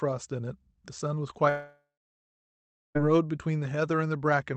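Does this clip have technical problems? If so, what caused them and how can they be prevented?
Yes. From 1.49 s to 2.97 s the speech stops for a long network dropout. The receiver first stretches the last sound into a fading buzz. Then about 1.1 s of near-silence follows. When the speech resumes, roughly 1.46 s of it is simply gone, with the top band still capped near 8 kHz by the call codec. The likely cause is packets failing to arrive across that whole stretch. A steadier connection, or forward error correction with redundancy, would prevent it.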